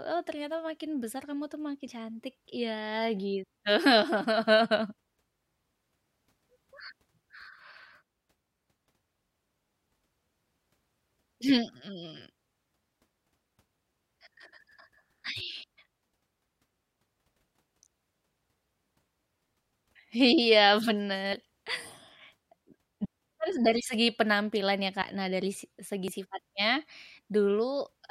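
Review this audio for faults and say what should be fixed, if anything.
The speech has compressed frames skipped at 1.84–1.87, 4.23–4.25, 15.37–15.42, 21.32–21.36, 23.01–23.06, 25.01 and 26.08–26.12 s. At each point whole coded frames never reach playback, so the speech lurches forward by somewhere between about 20 and 70 ms. To prevent it, repair or re-source the damaged file and add error-resilient framing or checksums before decoding.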